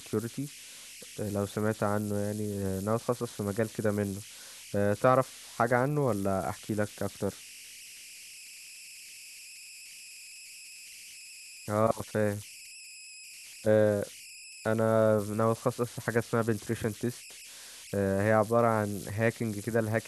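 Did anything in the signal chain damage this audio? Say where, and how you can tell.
Yes. The converter stage shows converter idle tones throughout the speech: a whistle around 3 kHz in the pauses, with a grainy texture under quieter passages, about 18 dB below the signal. A delta-sigma modulator running without dither locks into repeating bit patterns when its input is small, and those patterns produce tones whose pitch follows the input's offset. Mains hum would instead sit at a fixed low frequency and its harmonics, not a high whistle.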